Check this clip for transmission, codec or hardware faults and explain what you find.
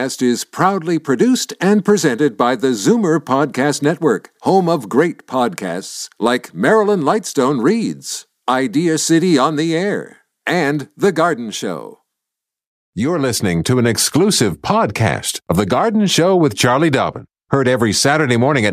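One fault appears near the end of the speech: channel delay (comb filtering), from 17.01 to 18.01 s. One channel lags the other by roughly a single sample, a few hundredths of a millisecond, before the two are summed to mono. With so short an offset, the first cancellation notch falls around 20 kHz, so the sound turns dull and loses top-end air rather than becoming hollow or phasey. A low-pass filter would cut off more steeply at a fixed point. This dulling is a gradual sag toward the notch.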